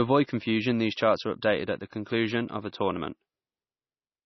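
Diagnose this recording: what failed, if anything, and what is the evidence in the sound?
The codec stage likely failed: heavy MP3 compression, with damage that fits a bitrate around 24 kbps. Throughout the speech nothing survives above 5.9 kHz, and weak frequency lines flicker on and off between frames, giving a watery, swirling texture and smeared attacks.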